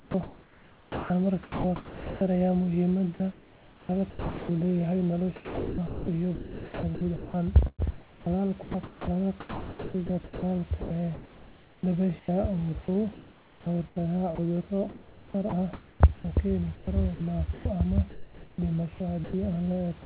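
The speech keeps breaking up over six stretches, from 0 to 2.21 s, 3.14 to 4.49 s, 5.36 to 12.28 s, 12.86 to 14.38 s, 14.89 to 16.24 s and 16.75 to 18.58 s. This is sound chopped by the voice detector, likely because the sender's detector kept toggling transmission off during quieter syllables and word edges. Those parts were replaced with comfort noise, adding up to about 3.8 s in the long middle stretch and roughly 0.7 to 1.7 s in the others. The result sounds choppy, with the gaps filled by synthetic noise, while the real room noise sits about 29 dB below the speech. On a waveform, speech envelopes are cut off abruptly and replaced by flat, low-level noise blocks. On a spectrogram, harmonic striations stop sharply and give way to uniform, featureless noise bands, all confined below 4 kHz by the G.711 call path.

From 19.24 to 19.33 s, sound dropped by the voice detector swallows about 60 ms of sound, likely because the detector judged it to be background. 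A 90 ms patch of steady comfort noise fills the gap, so the sound cuts out before the noise continues. The waveform shows the sound truncated into a brief flat noise floor. On the spectrogram, the speech energy ends early in a vertical edge followed by an even, textureless smear.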